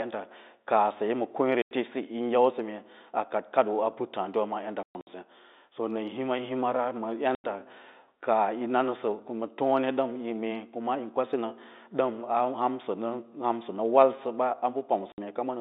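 Speech on a telephone-band line, roughly 250 Hz to 3.7 kHz, as G.711 carries it. Packet loss filled with silence leaves hard-edged gaps at 1.62–1.71 s, 4.83–5.07 s (scattered), 7.35–7.44 s and 15.12–15.18 s, with gap lengths pointing to 30 ms packets.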